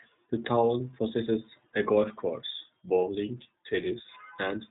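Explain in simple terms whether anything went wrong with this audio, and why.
Something did go wrong: the whole clip has passed through the iLBC codec, a phone-call speech squeezer, and you can plainly hear it from start to finish. It throws away everything above about 3.8 kHz, so the speech sounds muffled and boxy, like an old landline. It also chops the sound into 30 ms slices and rebuilds each one on its own, which gives the speech a slightly rough, synthetic edge.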